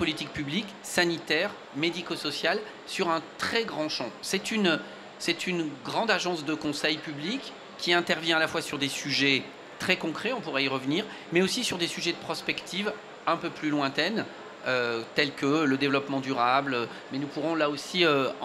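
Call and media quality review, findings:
No faults found on review; no dropouts, glitches or level anomalies heard.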